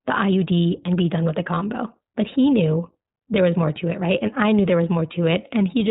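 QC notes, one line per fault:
Throughout: iLBC codec. Nothing passes above 4 kHz, so the speech sounds narrowband, rough and plainly synthetic, which fits the 15.2 kbps, 20 ms frame mode coding each frame's excitation independently. A spectrogram shows a hard ceiling at 4 kHz.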